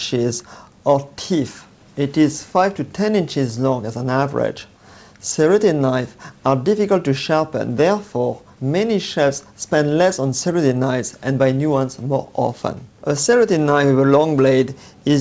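Nothing stood out on listening; the audio has come through a call path that carries nothing above 8 kHz.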